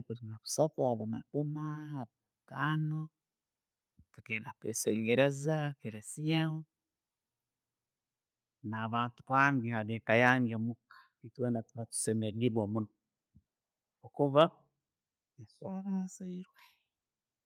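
No audible technical faults.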